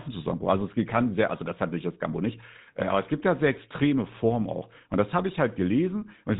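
A buzzy, gravelly roughness runs through the speech from start to finish, and the top end is missing: nothing comes through above about 3.8 kHz, so sibilants sound dull and clipped. This is GSM full-rate codec damage, plainly audible. The codec rebuilds each voice from a vocal-tract model driven by a sparse train of evenly spaced pulses, which produces the grainy buzz. The narrow band and coarse texture fit a 13 kbps GSM full-rate stream.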